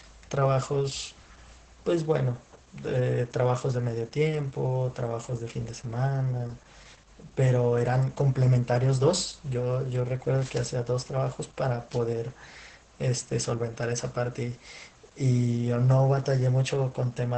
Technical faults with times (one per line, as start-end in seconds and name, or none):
0.00-17.37 Opus voice compression